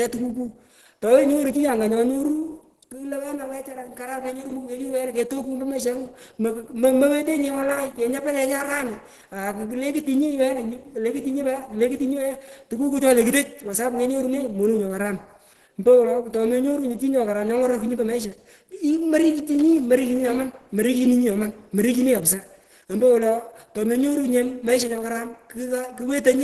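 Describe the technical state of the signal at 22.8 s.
At 22.8 s, as across the whole clip, the speech sounds muffled, hoarse and grainy, with nothing above 12.1 kHz. This is likely heavy Opus compression at 12 kbps in hybrid mode. Bands are noise-filled instead of left empty, so it roughens rather than swirling like MP3.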